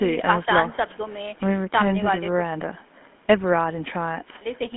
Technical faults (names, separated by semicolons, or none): GSM full-rate codec